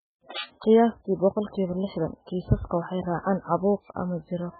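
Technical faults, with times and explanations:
Throughout: MP3 compression, heavy. Nothing remains above about 4.5 kHz, so the speech sounds dull and muffled. Weak frequency components flicker on and off between frames, giving a watery, swirly texture. Attacks smear. This likely comes from a very low bitrate, around 8 kbps.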